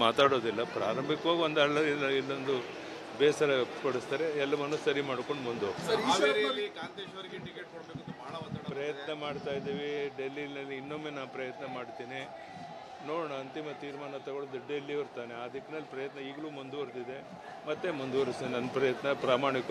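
From 6.06 to 6.57 s a fast ticking zips along the sound as it drops by around 10 dB: zipper noise, the level stepped about forty times a second without smoothing.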